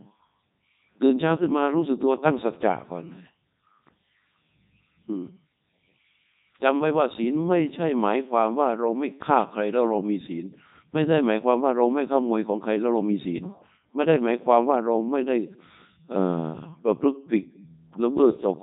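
Speech run through a Codec 2 vocoder the whole way, heavily damaged: robotic and buzzy, nothing above 3.8 kHz, and the sound fits its 3.2 kbit/s mode.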